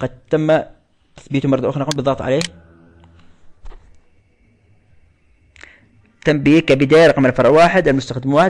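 Nothing goes wrong anywhere in this recording; there's no glitch, dropout or other technical fault to point to at any moment.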